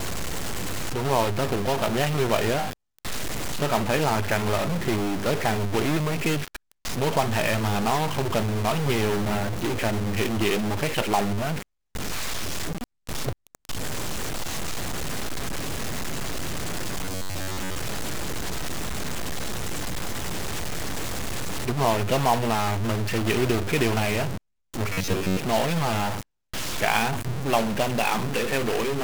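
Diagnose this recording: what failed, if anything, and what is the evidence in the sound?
A stuck bit runs through the whole speech clip, a distortion riding on every sound, with the pauses never going clean but filling with a steady noise floor. The stage is likely the converter or its data lines. One bit of each sample holds a fixed value, so about half the samples land off by that bit's weight. Because the error follows the waveform and flips with the sign of small values, silence turns into noise.

Robotic sound from repeated short buffers appears at 17.05 to 17.79 s and again at 24.93 to 25.39 s. The speech becomes a rigid metallic buzz at 93.8 Hz that still tracks the syllables loosely. The stage is likely the driver or buffer layer. New audio arrived too seldom, so the last block of about 10.7 ms was replayed in place of the real signal for most of each stretch.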